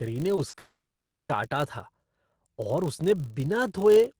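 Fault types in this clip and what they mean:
Filter restarted on every block: each block starts from silence, so a 50 Hz buzz runs under the speech and follows its level.
Short concealed packet loss: gaps of 20 to 40 ms were filled by continuing the last sound. This smears the speech near 0.35 s and 0.49 s.
Long network dropout: 0.7 s from 0.59 s is missing, likely lost in transit. A fading fill gives way to about half a second of silence.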